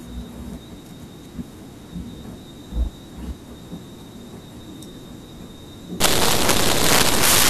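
From 6.00 s to the end of the speech at 7.50 s, the signal turns into loud, harsh broadband noise. Those samples are built from the wrong bytes. The reader is assembling each sample with its bytes misaligned or in the wrong order, so the fast-changing low bits end up in the high, loud part of every value. Ordinary clipping or dropout behaves differently. This hiss is broadband, close to white on the louder sounds.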